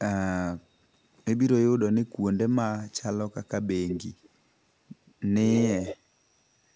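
Echo leak shows up four times, a delayed copy of the speech trailing the original by 164 ms, most likely from a far-end loudspeaker whose echo canceller let residue through. At 3.88–4.0 s and 5.51–5.96 s it is fairly strong, about 10 dB under the speech. At 4.23–4.29 s and 5.06–5.14 s it is only a faint wisp, roughly 35 dB down. A spectrogram shows ghost copies of the speech pattern shifted right by 164 ms, all confined below the 8 kHz band edge.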